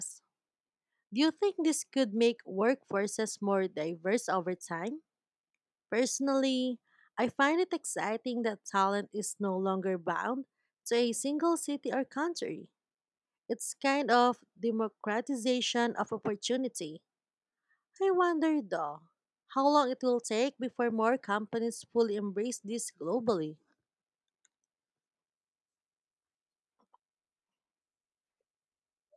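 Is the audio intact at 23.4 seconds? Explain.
Yes, the speech is intact at 23.4 seconds, with no fault at that moment.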